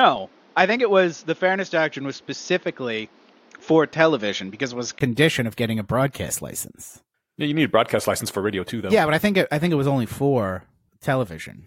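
For the first five seconds or so, up to 5.01 s, the speech sounds dull and boxy. Nothing gets through above 6.7 kHz, and there's a faint bed of noise sitting about 35 dB under the speech. Then there's a 20 ms gap and the full band comes back just before "of getting a broadcast", with the level about the same. That pattern is most likely the input switched to a poorer device, something like a headset's call profile, before returning to the better mic.

Later, at 8.54 s, between "a broadcast license for" and "too though", there's a quick chirpy blip. It's a corrupt frame decoded: a compressed frame with flipped bits got played anyway, so energy landed at the wrong frequencies. It sounds like it spans a few frames' worth of damage and peaks at about -30 dBFS, so it's a short, fairly soft glitch.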